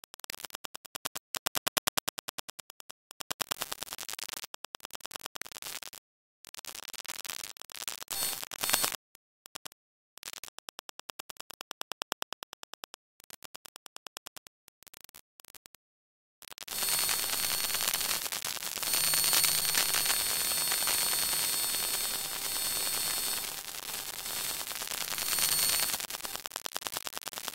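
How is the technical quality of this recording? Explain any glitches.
Technical quality is poor: a coarse grain runs through the whole recording, and a nearby mobile phone interferes near the end.

Low bit depth without dither: the audio was likely reduced to about 5 bits with plain rounding and no dither. The rounding error follows the signal and is nearly as loud as the sound itself, so the whole clip is grainy and gritty, and quieter moments sputter or drop out.

GSM signalling bursts, 23.05 to 23.77 s: a 2G phone nearby sent short groups of radio bursts, as it does while signalling, and the audio circuit rectified them. The result is a galloping dit-dit-dit of short 217 Hz buzzes, about 10 dB below the signal.

GSM phone buzz, 23.89 to 24.76 s: the phone then transmitted continuously, as in a call, pulsing 217 times a second, and the circuit again picked up and rectified those pulses. 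This produces a hard, raspy 217 Hz buzz, unrelated to the sound, about 20 dB below the signal.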